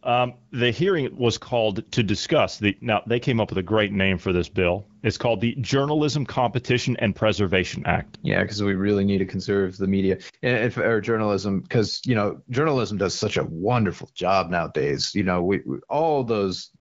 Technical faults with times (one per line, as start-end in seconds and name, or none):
none